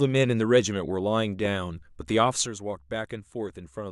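A short speech recording with two faults. At 1.45 to 1.47 s, a voltage spike, likely from a switch, static or driver glitch, hits the signal as one loud pop, peaking a few dB above the speech, which continues underneath. From 2.46 s to the end, one stereo channel drops out, likely a lost connection, so after mono summing the speech falls abruptly by 6 dB and is otherwise unchanged.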